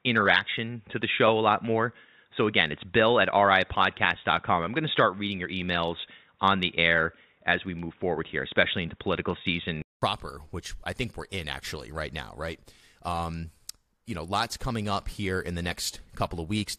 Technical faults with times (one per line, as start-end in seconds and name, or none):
0.00-10.02 input switched to a poorer device
15.70 damaged data in a compressed stream